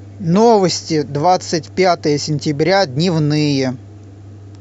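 Speech recording with no audible technical faults.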